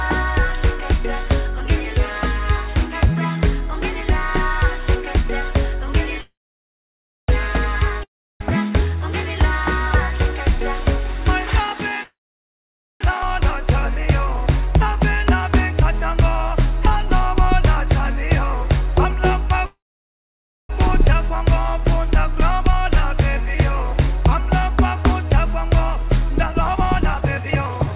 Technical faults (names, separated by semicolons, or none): call audio freeze; long network dropout; skip ahead; jitter buffer speed-up